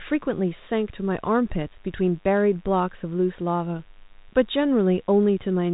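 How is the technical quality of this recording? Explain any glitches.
The speech carries one fault, present throughout all of the roughly 6 seconds. It is heard over band-limited telephone audio that stops near 3.8 kHz, consistent with 32 kbit/s G.726 ADPCM as used on DECT handsets.

DECT cordless phone buzz runs from start to finish. A nearby DECT handset or base transmits a radio burst every 10 ms, and the audio circuitry rectifies it. The result is a thin, steady 100 Hz buzz rich in harmonics, sitting around 35 dB below the speech.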